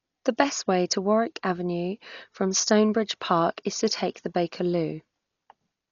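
Dolby Digital compression damage runs throughout this speech clip: nothing reaches above 7 kHz, and heavy rough, fluttering noise suggests a likely low-bitrate encode around 40 kbps, with dither filling unfunded frequency lines.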